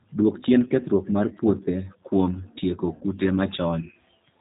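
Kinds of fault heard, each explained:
G.729 codec: plainly audible throughout, an 8 kbit/s speech coder rebuilding sound from filter, pitch and pulse parameters, so nothing above 4 kHz and a rough synthetic edge.
VoIP packet loss concealed by the speech codec: at 2.95 to 3.04 s, after "mar puothe kuom tieko", about 60 ms missing; the decoder extrapolates, fading into buzz or coloured noise, weak or distorted afterwards.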